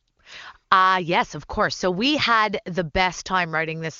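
Speech over AMR wideband, with no audible faults.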